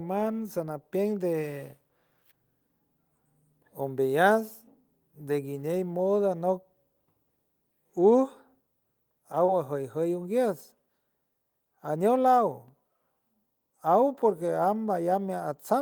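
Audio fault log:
9.45–9.50 s, short concealed packet loss: a brief smeared wobble; 20 ms of speech missed the decoder, which stretched the preceding sound across the gap, then blended back.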